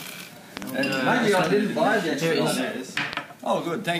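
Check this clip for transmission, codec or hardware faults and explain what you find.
There's one hardware-type fault here, a loud pop, heard three times. A double pop lands at 0.57 to 0.64 s, then single ones at 1.47 to 1.49 s and 3.13 to 3.15 s, each roughly 15 dB above the sound. A sudden voltage step, likely from a plug, switch, static or driver glitch, gets added and shaped by the circuitry downstream, giving sharp pops while the audio carries on underneath.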